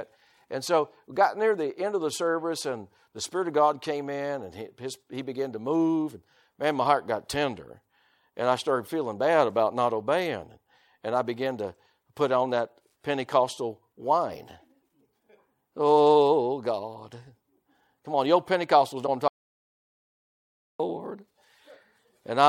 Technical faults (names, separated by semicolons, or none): broken MP3 bit reservoir; audio dropout to silence